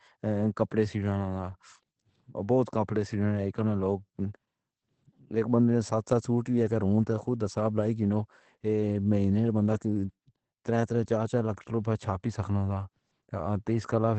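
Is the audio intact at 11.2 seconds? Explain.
No. At 11.2 seconds the speech carries Opus voice compression, present across the whole clip. The SILK predictive coder quantises the excitation coarsely, consistent with about 12 kbps, so voices sound hoarse and faintly robotic. A spectrogram shows a flat cut-off with nothing above 8.5 kHz.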